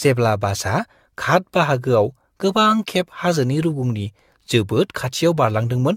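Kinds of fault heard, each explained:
Generation loss: speech sounds swirly, smeared and hollow throughout, with blurred attacks, likely from roughly seven AAC re-encodes at around 96 kbit/s stacking up artefacts.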